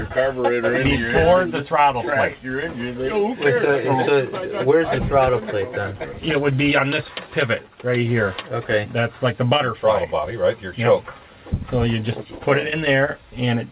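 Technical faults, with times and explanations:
No technical faults detected.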